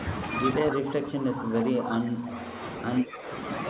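From 0.57 to 2.58 s the speech sinks by as much as 15 dB or so. That's speech suppressed in double talk: both ends were talking, and the canceller likely ducked the near talker along with the echo. It dips again, more gently, at 3.0 to 3.27 s. Inside that first stretch, at 0.70 to 0.77 s and again at 1.90 to 1.97 s, a faint copy of the voice trails about 135 ms behind, some 10 to 15 dB down. That's echo leak, most likely the loudspeaker pickup getting past the canceller and coming back. Everything sits under 4 kHz, which fits a G.711 call path.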